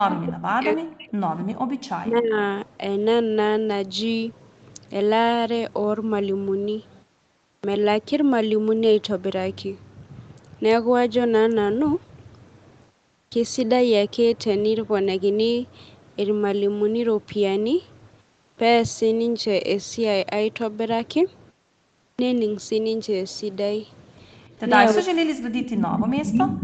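From 0.0 to 1.15 s, and again from 1.95 to 2.37 s, the speech is pulled down by roughly 40 dB and breaks up. This is speech suppressed in double talk, likely caused by the echo canceller failing to separate the near talker from loudspeaker echo while both sides spoke, so it attenuated everything.

Between those stretches, from 1.47 to 1.67 s, the room background drops out abruptly by about 40 dB and then returns. This is background gated by the echo canceller: while loudspeaker playback was present, the canceller clamped the microphone path hard for about 200 ms.

Four phrases begin abruptly out of silence with their onsets missing, a clipped start after a pause. At 7.57 s, 66 ms is lost after a 0.61 s pause. At 13.25 s, 69 ms is lost after 0.42 s. At 18.51 s, 64 ms is lost after 0.37 s. At 22.12 s, 69 ms is lost after 0.68 s. In each case the output device went idle during the gap and needed time to resume.

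From 24.94 s to the end, the same double-talk suppression returns, again cutting the speech by roughly 40 dB in pieces.

Inside that stretch an echo leak appears. From 25.61 to 26.11 s, a delayed copy of the voice, 279 ms behind, is heard a few dB below the direct speech. From 26.32 to 26.46 s it returns at about the same level as the speech. This is likely residual loudspeaker pickup on the far side that its canceller did not remove.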